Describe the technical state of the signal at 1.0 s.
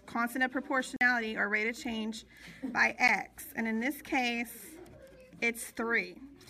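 At 1.0 s the signal sits inside a block of digital silence running from 0.96 to 1.01 s, roughly 46 ms, a length that fits a 2048-sample buffer left unfilled. The audio drops straight to silence and returns without any fade, so each edge produces a sharp discontinuity. At this length the result is a short, distinct hole in the sound, not a single tick.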